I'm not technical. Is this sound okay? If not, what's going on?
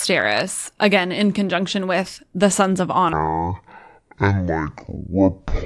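No. From 3.13 s to the end, a wrong sample rate plays the speech at half speed, so it sounds slow and a full octave lower.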